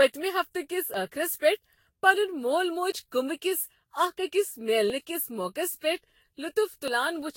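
Speech throughout carries generation loss: a swirly, hollow, smeared quality with softened consonant attacks, and nothing above 16.6 kHz. This is most likely the result of about seven successive re-encodes, which fits a Vorbis chain near 61 kbit/s. What separates it from a single low-bitrate encode is that the smearing and hollowness are stronger than the 16.6 kHz bandwidth alone would explain, because each pass quantises on a new frame grid and the errors pile up. There is also audio missing between chunks, heard as brief skips at 0.94, 2.92, 4.90 and 6.88 s. Each one removes roughly 20 ms, and the two sides butt straight together. The steady spacing of almost exactly 2 s points to the likely cause: a recorder or processor working in 2-second chunks and losing a sliver at each handover. That regularity, and the absence of any silent gap, set these skips apart from random packet dropouts or mutes.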